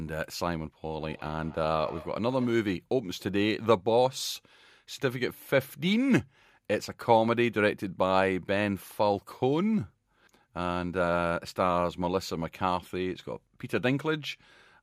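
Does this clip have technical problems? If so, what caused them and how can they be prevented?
Yes. From 0.96 to 2.67 s there's a feedback echo between two devices. The speech comes back round at a steady interval of roughly 150 ms, peaking about 20 dB below the direct sound. That's what you get when two devices in the same room are on one call: one plays out what the other's mic sent, that mic hears it again, and neither echo canceller touches sound from the other device. To prevent it, keep only one device's audio active per room, or have everyone else wear headphones.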